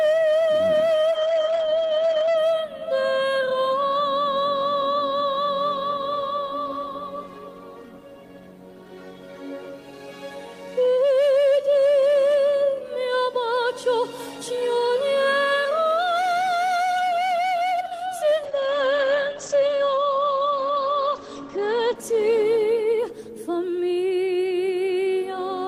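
At 1.12 s a call bitrate drop begins. The encoder falls from 40 kbps to 10 kbps and stays at its lowest for about 1.2 s. The top end narrows from 20 kHz to 8 kHz, so the sound turns muffled and rough. It recovers by 2.43 s. A second drop runs from 18.45 s to 24.37 s, down to 11 kbps, bottoming out for about 2.4 s with the same 8 kHz ceiling and watery coarseness.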